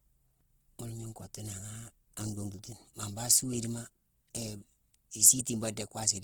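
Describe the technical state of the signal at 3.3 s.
At 3.3 s the speech sounds grainy and rough, with a noisy texture rather than the swirling of MP3. The full bandwidth is kept, with content reaching to about 20.1 kHz, and the damage is plainly audible across the whole clip. The likely cause is Opus compression in its music (CELT) mode at a rate that points to about 16 kbps. Short of bits, it fills bands with folded or noise-like content.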